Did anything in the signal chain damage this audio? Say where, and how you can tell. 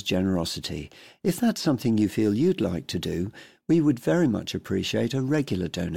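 No, nothing along the chain has left an audible mark on this speech: the level, timing and frequency content hold steady throughout, with no stage of the path standing out in the sound.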